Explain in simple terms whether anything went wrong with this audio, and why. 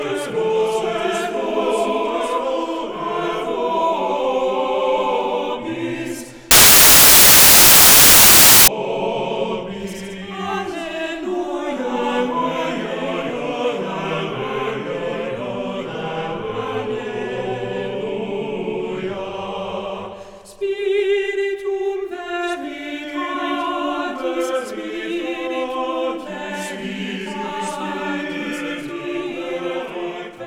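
From 6.51 to 8.68 seconds the audio turns into a burst of loud hiss, like harsh static. This is samples built from the wrong bytes: each sample is stored as a few bytes, and here the player put them together in the wrong order or position. The tiny, rapidly changing details ended up treated as the main part of each value, so the result is noise.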